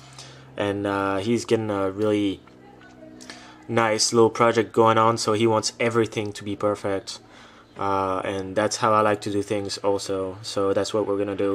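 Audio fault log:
Nothing in the signal stands out as a technical fault at any point.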